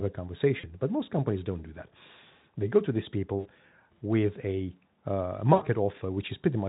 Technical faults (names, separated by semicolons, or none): VoIP packet loss concealed by the speech codec